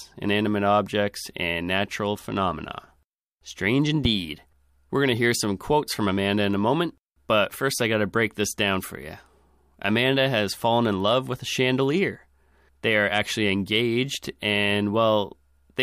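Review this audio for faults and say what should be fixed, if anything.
A single loud pop sits at 4.05 to 4.08 s, a sharp thump standing around 10 dB above the speech, which continues underneath it. It is likely a voltage step or pulse from a plug, switch, static discharge or driver glitch, shaped by the downstream circuitry. On a waveform it is a tall, narrow spike; on a spectrogram, a thin vertical stripe across all frequencies. Secure connections, ground equipment properly and avoid switching gear while recording.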